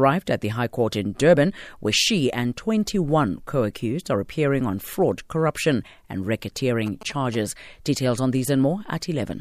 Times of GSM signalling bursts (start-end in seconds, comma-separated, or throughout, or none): 6.87-7.36